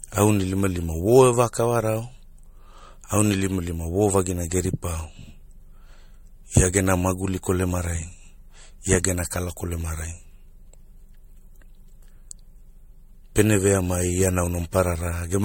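From start to finish the speech has a swirly, watery smear, with a hollow, phasey quality and consonant attacks that blur rather than snap. Nothing is heard above 16.6 kHz. This is generation loss, likely from the audio being decoded and re-encoded as MP3 about five times at similar low rates, around 65 to 70 kbit/s. Each pass re-quantised on a shifted frame grid, so artefacts and spectral holes accumulated beyond what one such encode would leave.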